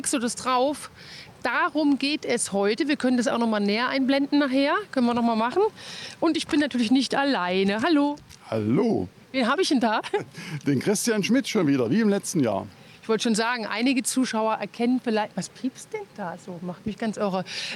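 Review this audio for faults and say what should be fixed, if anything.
Nothing in this audio needs fixing. No faults can be heard anywhere in the recording, so no corrective or preventive step is called for.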